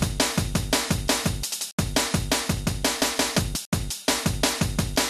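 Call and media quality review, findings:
MP2 compression, whole clip: dull top, gurgling granular texture, upper bands flickering in and out. Likely a low-rate MPEG Layer II encode, fits roughly 80 kbps. Unlike a fixed low-pass, high content gates on and off by sub-band.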